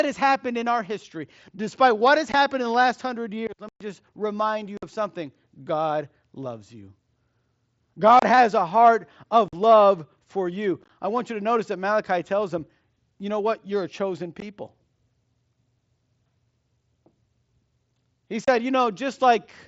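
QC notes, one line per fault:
2.32 s, 3.69 to 3.81 s, 4.77 to 4.83 s, 8.19 to 8.23 s, 9.48 to 9.53 s, 10.82 to 10.90 s, 14.40 s, 18.45 to 18.48 s, unconcealed Bluetooth headset packet loss: headset voice packets never arrived and nothing filled them. Each loss leaves an abrupt silent hole in the wideband speech.
The holes run from 15 ms up to 120 ms. The longest follows "last hundred years let". Others sit just before "of something" and between "has a heart" and "love for you I". At 10.82 s the loss breaks into short scattered gaps that sound chopped.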